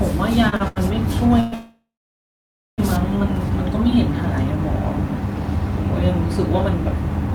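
Short stalls from a late packet at 0.49, 0.56 and 0.68 s: the jitter buffer ran dry and the last sound was stretched for 28, 37 and 80 ms, then resumed with nothing lost.

Call audio freeze from 1.40 to 2.80 s, in two stretches: the sound is held as a fading buzz, then falls silent for about 0.9 s, likely from packets held up in transit, before resuming where it stopped.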